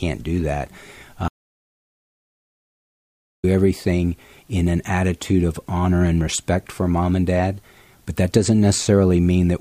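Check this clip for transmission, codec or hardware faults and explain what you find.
One fault is present. Audio dropout to silence, 1.28 to 3.44 s: the input was likely lost while recording continued, so after "do that" comes 2.15 s of silence, no room tone, until "everything in an attitude".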